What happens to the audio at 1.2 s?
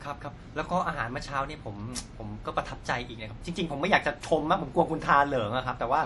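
At 1.2 s the speech carries the same damage heard across the whole clip, likely from MP3 compression. Nothing is present above about 11.4 kHz, because the encoder cut the treble at a fixed point to save bits. Quieter frequency lines are zeroed and flicker on and off between frames, giving a watery, swirling texture, with metallic chirps on s sounds and smeared attacks. The damage is plainly audible, which fits a low bitrate around 48 kbps.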